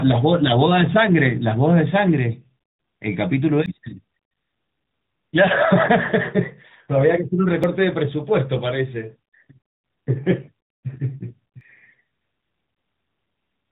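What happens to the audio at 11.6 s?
At 11.61 s there is a sudden skip where audio missing between chunks is the likely cause: a few tens of milliseconds vanish as the recording moves from one 4-second chunk to the next, and the two sides are butted together without silence. On the waveform this shows as an abrupt discontinuity, with a vertical line on the spectrogram.

Around that moment, as through the whole clip, the sound carries plainly audible AMR narrowband mobile codec damage, a buzzy, synthetic quality consistent with a setting near 10 kbps. On a spectrogram everything stops flat at about 3.8 kHz, with empty space above.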